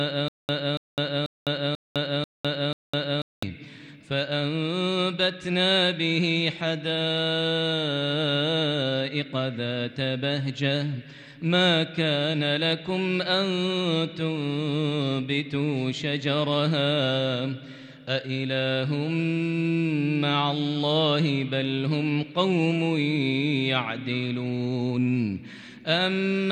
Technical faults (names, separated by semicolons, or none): stutter with silent gaps